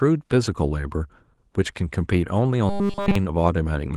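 Between 2.70 and 3.15 s, late audio was likely replaced by a looping fragment of about 5 ms, causing robotic sound from repeated short buffers: a rigid, metallic 200 Hz buzz.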